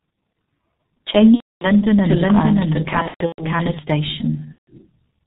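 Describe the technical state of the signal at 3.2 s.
VoIP packet loss concealed by the speech codec, from 3.02 to 3.43 s: audio keeps dropping out across about 360 ms, with roughly 270 ms missing in total. The longest gap is about 120 ms, which fits several consecutive 30 ms frames lost. The decoder fills each gap by extending its last pitch and filter at falling gain, so the sound turns into a buzzy, fading tone and stays weak and distorted even between gaps.

Doubled audio track, from 2.05 to 3.79 s: a second, full-band copy of the sound runs about half a second behind the first and at roughly the same level. It has no reverberant tail or room colouring and starts and stops abruptly, so at 3.2 s two out-of-step versions overlap. The likely cause is the signal being captured a second time by a slower path.

G.723.1 codec, present throughout: nothing above 4 kHz comes through, and the slowly updated voice model leaves the speech muffled and hoarse, with smeared consonants. 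The heavy damage fits a low-rate setting near 6 kbit/s working in 30 ms frames, and this low-rate coding also shapes the concealment artefacts heard at 3.2 s.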